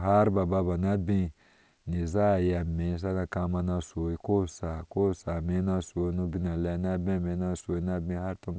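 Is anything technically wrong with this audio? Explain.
Yes. Aliasing runs throughout this speech: downsampling without an anti-alias filter folds content above 8 kHz back down as faint, gritty sibilants, unlike a clean band-limit, which simply dulls them. This fits a drop from 48 kHz to 16 kHz.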